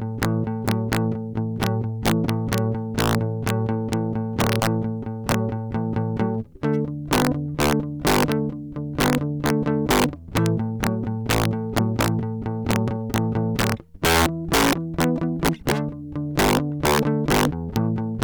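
Integer overflow runs throughout the music: peaks driven about 7 dB past full scale wrap to the opposite sign, producing violent cracks on around one percent of samples.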